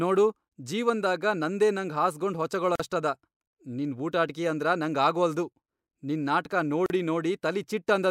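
A speech recording breaks twice with a gap at a join of encoded pieces. Silence opens at 2.76 s for about 42 ms, and again at 6.86 s for about 39 ms. Both gaps have their edges smeared by the codec. The speech resumes exactly where it stopped. Each section was encoded on its own and then butted together untrimmed, so the encoder's start-up delay and final-frame padding remain as dead air.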